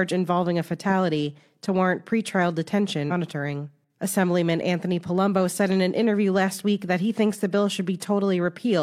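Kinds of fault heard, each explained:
Compressed frames skipped: at 3.07 s whole codec frames of about 46 ms go missing, so the speech jumps ahead roughly 0.3 s.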